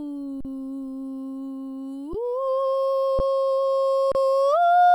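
At 0.41 s the music stalls for about 43 ms, then resumes. This is an underrun with held sample. The output buffer ran dry, and the converter held its last value. The waveform sits flat away from zero, so the sound simply stops without a click. Brief freezes follow at 2.13 s and 3.19 s, each about 11 ms, and a 32 ms one at 4.12 s. Little or nothing seems skipped. Playback picks up where it stopped, so each return is soft.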